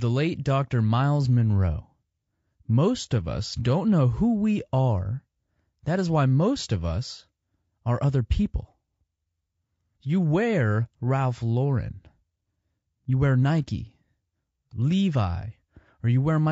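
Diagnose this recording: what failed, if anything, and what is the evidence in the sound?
The codec stage is where this one went wrong. All through the speech there's plainly audible low-delay AAC compression: rough, grainy voicing, noise filling the gaps between harmonics, and a lowered or synthetic top end. Short frames smear the pitch detail, likely AAC-ELD starved at around 32 kbps.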